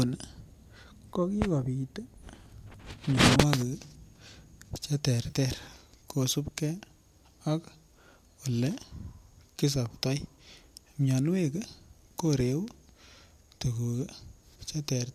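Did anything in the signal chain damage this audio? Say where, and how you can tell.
Yes. Between 5.23 and 5.36 s there is AAC frame loss with concealment at the network-to-decoder stage. About 70 ms of audio drops out in short bursts spread over 100 ms, the longest about 30 ms. Each gap is refilled from the last good spectrum, so the speech turns smeared and noisy. On a spectrogram, the harmonic lines blur into broadband mush. On the waveform, the envelope turns flat and grainy.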